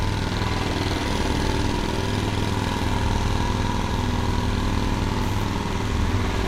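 No technical faults can be heard anywhere in this recording of sounds; the signal stays intact and continuous throughout.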